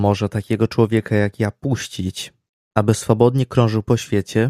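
No technical faults can be heard anywhere in this speech recording. There is nothing here to place in time or to trace back to a cause.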